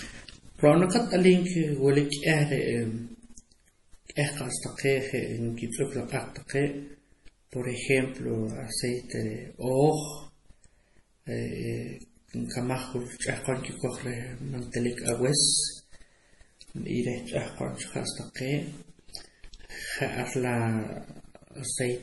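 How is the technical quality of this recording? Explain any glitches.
The quality is poor, with heavy coding damage throughout and one brief smeared attack.

Throughout, the speech sounds watery and swirly, with nothing above 11.5 kHz; this is likely MP3 compression, at around 32 kbps, starving bits. Unlike plain low-pass filtering, weak components flicker on and off.

At 6.48 s, pre-echo: coding noise spreads about 19 ms before a sharp onset, heard as a short hiss ahead of it, not a click after.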